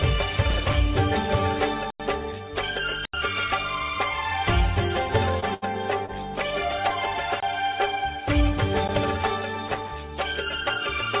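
A worn contact making and breaking from 0.33 to 0.75 s produces loose connector crackle, an irregular scratchy burst as the signal is chopped. At 1.90 to 2.00 s and 3.05 to 3.14 s, the output buffer likely went unfilled, leaving blocks of digital silence, holes of 93 and 82 ms. The first fits a 4096-sample buffer. Between 5.40 and 5.44 s, and again from 6.06 to 6.13 s, short concealed packet loss occurred: about 20 ms of audio never arrived and was continued from the preceding sound, heard as a brief smear or wobble. Between these, from 5.54 to 5.64 s, a burst of packet loss dropped about 80 ms, which was filled by a fading continuation before the sound resumes further on. Shorter blocks of digital silence follow at 7.40 to 7.43 s (23 ms, fitting a 1024-sample buffer), heard as a short hole, and at 8.88 s (12 ms), heard as a tick. Loose connector crackle returns from 9.67 to 9.91 s. Throughout, the call path's G.711 coding leaves nothing above 4 kHz.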